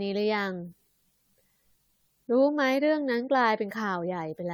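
Repeated lossy coding has degraded this speech clip from start to finish, most likely through decoding and re-encoding around five times with a codec whose character fits AAC-LC at 96 kbit/s. Each new pass requantises on a shifted frame grid, so coding noise and spectral gaps pile up. The speech sounds swirly and hollow, more smeared than that bitrate alone would produce, consonant attacks are softened, and there is nothing above 20 kHz.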